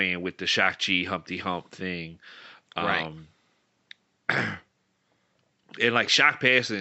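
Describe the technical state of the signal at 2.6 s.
At 2.6 s the signal is intact, with only the room's own background noise sitting far beneath the speech, about 49 dB down.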